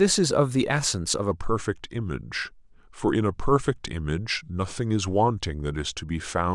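From 1.31 s to the end, a section at the wrong speed plays at 0.887x, about two semitones lower, the speech slowing and deepening, likely from a mismatched clock.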